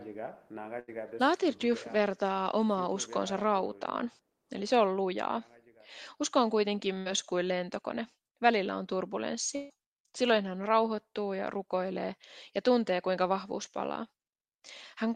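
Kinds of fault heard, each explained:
Burst of packet loss: Consecutive packets failed to arrive in time, three times in this speech clip, near 0.79, 7.00 and 9.55 s. Each time the receiver stretched the last sound forward and let it fade. That fill lasts about 83, 58 and 140 ms. It is heard as a brief held buzz or hiss. Speech then picks up further along. Roughly 80, 60 and 140 ms of speech are simply gone.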